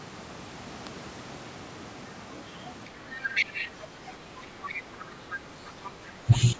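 From 3.16 to 3.7 s a second, quieter voice sits under the speech, roughly 15 dB down, then returns in faint scraps at 4.66 to 4.82 s, 4.99 to 5.04 s and 5.3 to 5.35 s. This is the other side's voice leaking through, likely loudspeaker echo the canceller left in the microphone signal.

Between 6.26 and 6.57 s the speech dips and breaks up in pieces, falling by up to around 15 dB for about a tenth of a second in total. This is speech suppressed in double talk, likely the echo canceller turning everything down while both sides spoke.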